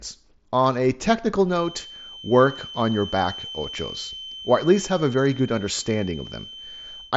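A speech recording in which a thin feedback whistle at 3.1 kHz enters at 1.43 s and continues to the end, sitting roughly 15 dB below the speech. It is likely from a loudspeaker-to-microphone loop held just at the edge of ringing. On a spectrogram it shows as an unbroken horizontal line at 3.1 kHz, while the waveform hardly reveals it. The spectrogram also shows everything cut off above about 7.7 kHz, which fits a wideband Bluetooth mSBC headset link.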